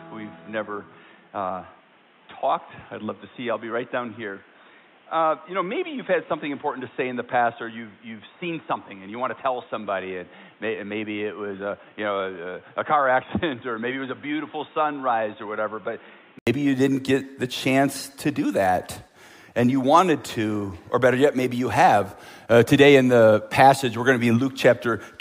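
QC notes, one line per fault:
0.00 to 16.47 s, input switched to a poorer device: the sound is dull and boxy, with nothing above 3.8 kHz, about 10 dB quieter, and carries its own background noise roughly 30 dB below the signal. At 16.47 s an 80 ms silence is followed by full, brighter, louder sound. The likely cause is a recording input that began on a narrower-band microphone or headset call profile and then switched to the main device.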